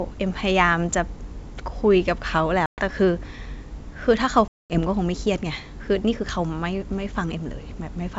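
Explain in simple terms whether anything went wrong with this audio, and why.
Packet loss on an ADPCM call hits this speech twice, at 2.66 to 2.82 s and at 4.48 to 4.79 s, leaving abrupt silent gaps of 120 ms and 220 ms. The decoder loses track of the sender, so the speech returns slightly distorted before settling.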